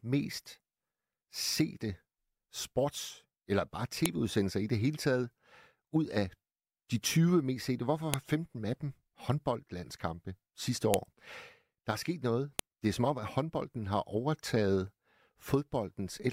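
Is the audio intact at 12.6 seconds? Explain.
No. At 12.59 s a file header played as audio gives a sharp click in the speech: header bytes read as samples, showing as a spike and a full-height broadband stripe.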